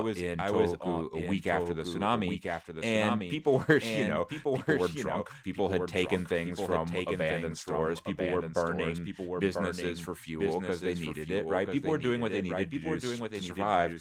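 Throughout the speech, every phrase returns about a second later as a dry, full-band repeat roughly 5 dB quieter, with no decay. This is a doubled audio track, likely the same signal captured a second time through a slower path.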